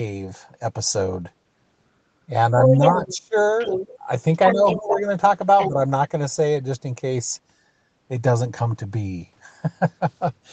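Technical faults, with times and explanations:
2.52–3.35 s, 4.54–4.6 s, 4.78–5.08 s and 5.69–5.8 s, speech suppressed in double talk: the talker's level drops suddenly, by about 25 dB in the first stretch and by about 5 to 10 dB later. This is likely the echo canceller turning everything down while both sides spoke at once. The waveform shows abrupt notches, and the spectrogram dims there.
2.58–3.16 s, 3.52–3.94 s, 4.35–5.0 s and 5.58–5.69 s, other side's voice leaking through: a second voice comes through, first about as loud as the talker, then about 5 dB, about 10 dB and again about 5 dB quieter. This is likely loudspeaker sound the canceller failed to remove from the microphone. On the spectrogram, a separate set of harmonic stripes runs across the talker's, both capped near 8 kHz.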